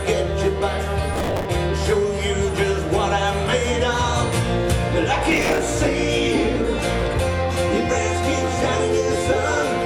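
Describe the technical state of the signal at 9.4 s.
At 9.4 s the signal is intact, with no audible dropout, distortion, or other technical fault.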